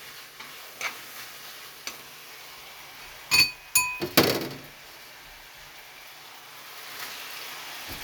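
No technical fault can be heard anywhere in this recording of sounds, and the signal stays intact and continuous throughout.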